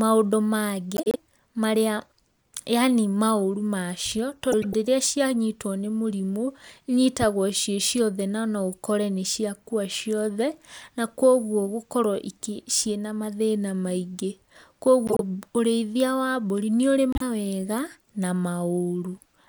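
Speech, with four short spots where frames arrive out of order: 0.96 to 1.16 s, 4.52 to 4.74 s, 15.07 to 15.21 s and 17.13 to 17.22 s. In each, two adjacent chunks got swapped before decoding, so the halves play in reverse order and you hear a garbled flutter. Chunk sizes run from about 26 to 105 ms, which fits swaps of one to four codec frames. Nothing goes missing; it's just reshuffled.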